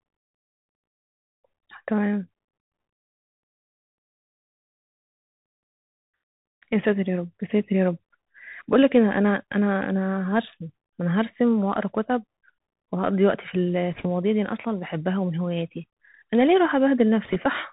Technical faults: Bluetooth CVSD headset codec; bit errors on a Bluetooth voice link

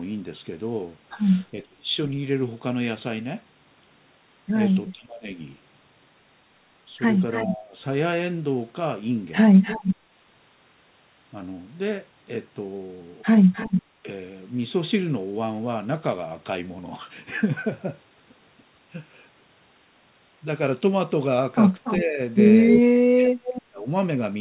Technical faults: speech suppressed in double talk; echo leak

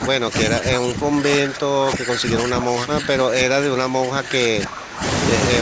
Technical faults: speech suppressed in double talk

